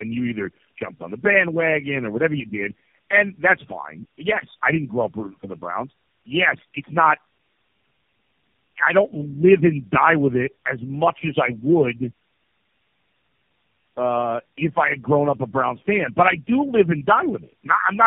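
Throughout, the speech sounds rough, muffled and warbly, with nothing above 3.7 kHz. This is tandem speech coding: the sound points to around four low-rate speech codecs in a row, each re-encoding the previous one's already degraded output, so the artefacts compound.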